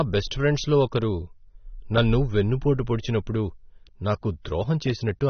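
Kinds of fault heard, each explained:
AAC compression: The speech was likely passed through a low-bitrate AAC-LC encoder, consistent with about 24 kbps, which discarded detail its hearing model judged unimportant. Nothing remains above 6.3 kHz, so it sounds dull, with plainly audible smearing and a fizzy, warbling texture on sibilants.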